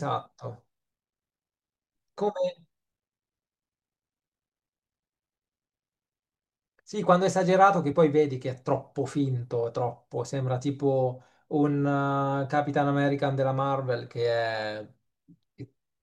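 At 7.91 s and 15.6 s, compressed frames are skipped. Each time, one 21.3 ms frame is lost, so the speech jumps ahead about 20 ms. Unlike a dropout, there is no silent gap.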